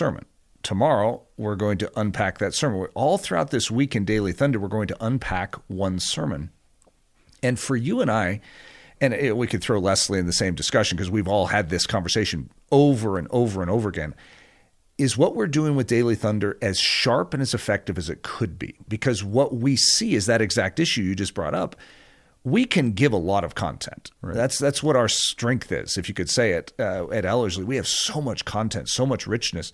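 Nothing technically wrong can be heard in this speech recording, which holds a steady, continuous signal throughout.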